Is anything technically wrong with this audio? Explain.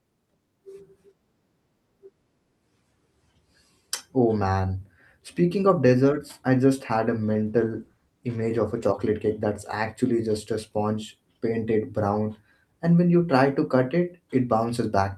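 Yes, there's a call bitrate drop from 7.27 to 8.91 s, right after "I just had a" and recovering by "cake that's actually just". The bandwidth estimate fell and the encoder coded the speech more coarsely. It sounds rougher and watery, which fits a dip from about 40 kbps to around 17 kbps.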